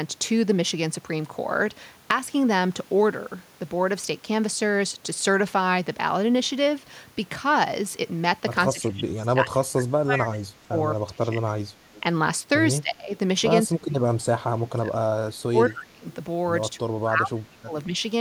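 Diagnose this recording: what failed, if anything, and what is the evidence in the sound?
The speech dips sharply at 8.73–10.75, 11.0–11.89, 12.81–13.14, 13.68–14.96, 15.47–16.05 and 16.76–17.94 s, falling by about 20 to 30 dB. This is call processing, likely speech suppressed in double talk: the echo canceller, unable to separate near speech from loudspeaker echo, attenuated both.

At 11.95–12.01 s a faint delayed copy of the speech appears, about 25 dB below it and trailing by 221 ms. This is call processing again, likely an echo leak: the far end's echo canceller let loudspeaker pickup through, and it returned.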